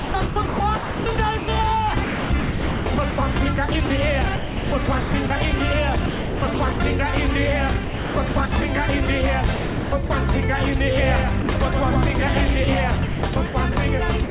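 From 0.00 to 1.48 s, 2.04 to 5.30 s, 6.06 to 6.80 s, 7.84 to 8.52 s, 9.06 to 10.10 s and 13.06 to 14.30 s, the sound is chopped by the voice detector. Within each stretch, pieces of the signal are swapped for synthetic comfort noise, about 0.8 s, 1.5 s, 0.5 s, 0.44 s, 0.44 s and 0.37 s respectively. The likely cause is the sender's detector toggling transmission on and off, so the audio stutters.

From 10.98 to 12.74 s, a doubled audio track appears. A second full-band copy trails the original by around a tenth of a second at roughly 5 dB lower. It has no reverberant decay or room colouring, so it reads as a distinct slapback. It cuts in and out abruptly at both ends. This is likely a second capture path or an edit holding two misaligned copies.

Inside that stretch, from 11.42 to 11.48 s, a brief sound drop by the voice detector removes 60 ms of audio. Steady comfort noise briefly stands in for the signal before transmission resumes. 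The likely cause is the detector mistaking a quiet moment for background and halting transmission.

All of this passes through a G.711 A-law call path, consistent with 64 kbps, with nothing above 4 kHz.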